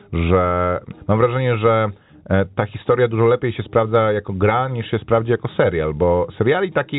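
Nothing stood out on listening to this speech, which comes through the telephone coding as expected.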